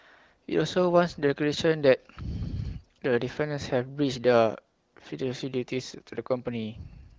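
Nothing's technically wrong with this speech clip; it just carries the familiar band-limited character of an HD Voice call over an AMR wideband link running at a comfortable rate, with only the light touch that codec leaves behind.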